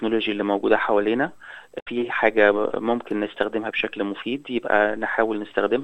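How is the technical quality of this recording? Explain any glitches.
One glitch mars the recording. Damaged data in a compressed stream, 1.79 to 1.88 s: corrupted bytes make the decoder misread frames and lose sync, producing a brief chirp, squawk, click or short hole in the sound.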